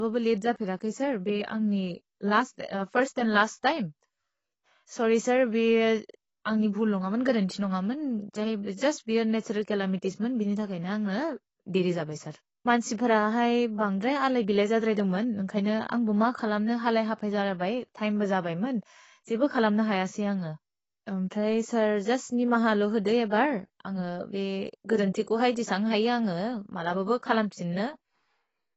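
Dull, band-limited speech runs the full length of the recording, with nothing above 8 kHz and a plainly audible warbling, smeared texture on sustained sounds and sibilants. The likely cause is AAC compression, AAC-LC at a low bitrate, which fits roughly 24 kbps.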